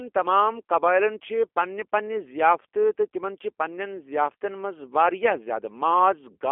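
From start to finish the speech carries G.729 codec damage. The band sits between 300 Hz and 3.4 kHz, and the rough, buzzy, synthetic texture points to an 8 kbit/s G.729A coder rebuilding each frame from a filter model and sparse pulses.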